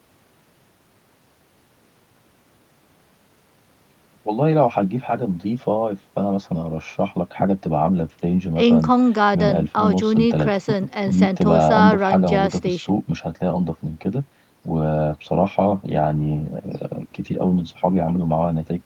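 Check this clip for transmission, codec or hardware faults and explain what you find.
No transmission, codec or hardware fault is audible anywhere in this speech recording.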